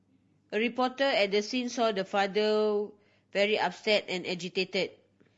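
The clip is speech with plainly audible coding damage from start to finish. The voice sounds rough and grainy, with noise between the harmonics and a thin, artificial top band. This is likely low-delay AAC compression (AAC-ELD), which fits a bitrate near 32 kbps. Its short frames resolve pitch harmonics poorly.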